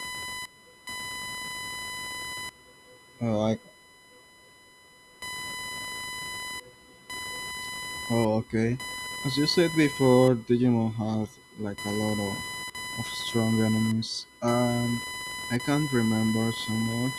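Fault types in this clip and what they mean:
computer activity noise: Shifting current demand from the computer's processor or peripherals disturbs the ground shared with the audio circuit, injecting interference. Here it runs through the whole speech clip as a buzz pulsing at around 1 kHz, roughly 15 dB below the speech.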